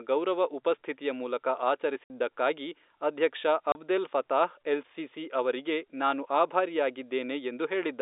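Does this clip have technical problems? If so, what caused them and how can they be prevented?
Yes. Packet loss filled with silence cuts the speech at 2.04–2.1 s, just after "ಗೌರವ ಉಪಸ್ಥಿತಿಯ ಮೂಲಕ", and at 3.72–3.75 s, just before "ಫತಾಹ್ ಎಲ್ ಸಿಸಿ ಅವರಿಗೆ". The 60 ms and 30 ms gaps fit two packets and one packet of 30 ms each. The receiver played digital silence where the packets went missing, so each gap starts and stops abruptly. The telephone-band G.711 coding carries the surrounding speech cleanly. To prevent these gaps, enable packet loss concealment and a suitably sized jitter buffer at the receiver, and give the voice traffic priority on the network.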